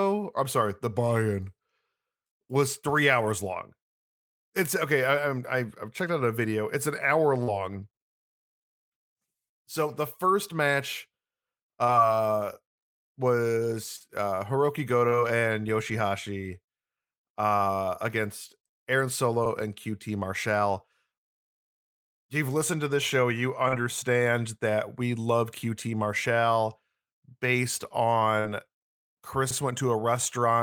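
Six short bits of concealed packet loss turn up, at 2.27, 7.43, 11.84, 13.96, 15.08 and 23.68 s. Each time about 40 ms never arrived, and the receiver stretched the preceding sound across the hole, so you get a quick smear or wobble. At 28.40 s there's a burst of packet loss, where the fill runs about 47 ms and fades into a held buzz or hiss before the speech picks up again. Then at 29.51 s you hit an overlapping-chunks join: 50 ms plays twice where one 10-second chunk meets the next, which comes across as a click or stutter.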